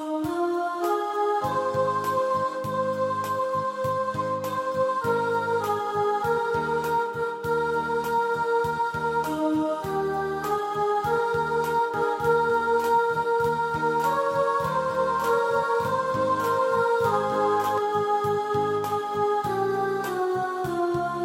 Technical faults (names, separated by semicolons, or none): doubled audio track